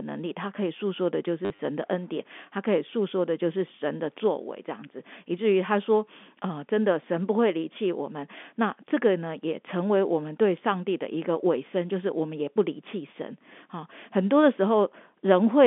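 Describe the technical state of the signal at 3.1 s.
At 3.1 s the signal is intact, with the speech carried cleanly through the normal G.711 telephone band of roughly 200 Hz to 3.5 kHz.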